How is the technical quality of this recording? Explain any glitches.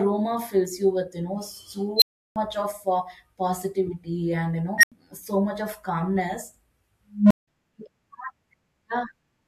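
The recording is marred by three bursts from an unstable filter. A recursive filter with bad coefficients feeds its output back until it swells, clips and overflows, then drops out until it resets.

At 1.96 s, a squeal around 4 kHz builds over 54 ms into a loud, clipped beep, then the speech cuts out for 341 ms.

At 4.78 s, a lower tone near 2 kHz rises within 53 ms and is followed by an 85 ms gap.

At 7.14 s, a low hum around 200 Hz climbs more slowly, over 169 ms, before a 171 ms silence.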